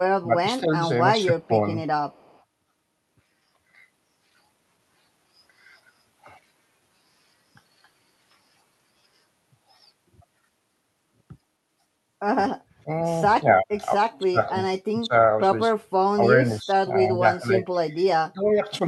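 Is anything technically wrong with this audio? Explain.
Yes, there are three echo-canceller problems here, all riding on a call path whose top end stops around 12 kHz.

Speech suppressed in double talk shows up three times: 0.22–1.53 s, 12.83–15.13 s and 16.16–18.59 s. The voice sags or chops out in pieces, adding up to roughly half a second, 0.7 s and a second respectively. The dips run from around 10 dB in the first stretch to about 30 dB in the middle one. The likely cause is both ends talking at once. The canceller couldn't tell the near talker from the loudspeaker echo, so it pulled everything down.

Echo leak pops up at 1.43–1.47 s and again at 2.11–2.43 s. It's a faint copy of the voice trailing by 267 ms, sitting roughly 35 dB under the speech, so it's a quiet, ghostly scrap rather than an obvious repeat. The likely cause is a far end on speakerphone whose canceller didn't fully scrub what its mic heard, so a bit got sent back.

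Background gated by the echo canceller hits at 15.80–15.99 s. For about 200 ms the room tone drops out, by about 29 dB at its deepest, then comes straight back. That's the canceller clamping the mic hard while the loudspeaker was playing and releasing once it let go.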